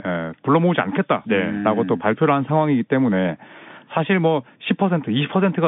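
No technical faults can be heard in this speech.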